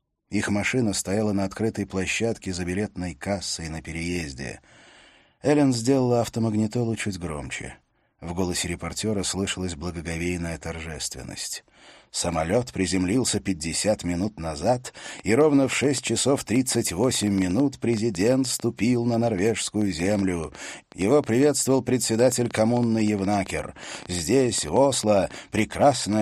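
A train of clicks runs from 15.06 s to 26.14 s: about 7 sharp pulses per second, spaced unevenly, some seventy in all. Each click has much the same shape and pokes roughly 5 dB above the surrounding sound, so it reads as a ragged ticking or popping laid over the audio and is heard in quiet gaps too. The likely source is electrical interference or a faulty connection or power supply.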